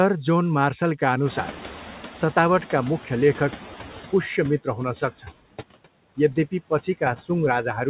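Across the whole recording, noise suppressor artifacts are present: the suppressor pulls down bands it judges to be steady noise by about 8 dB, frame by frame. The background dips in the gaps and swells under the speech. On a spectrogram the noise floor looks blotchy and pulses with the speech energy, all beneath the hard ceiling at 4 kHz from the narrowband call path.

From 1.25 s, right after "जोन मार्सलका", the noise suppressor is catching up. The room noise jumps by about 21 dB at roughly 1.5 s, and the suppressor's noise estimate lags, so the louder noise comes through with less reduction at first. Over about 3 s it settles, reaching a cut of about 12 dB by 4.27 s. The waveform shows a raised floor that tapers down, and the spectrogram shows a bright noise band fading over those seconds.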